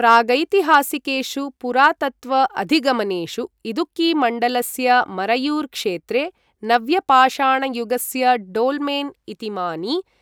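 A stage overloaded by about 1 to 2 dB, causing hard clipping that flattened speech peaks into brief crackles at 0.08–0.17, 0.74–0.76, 1.83–1.87 and 6.72–6.75 s, just after "मरयुर् क्षेत्रे".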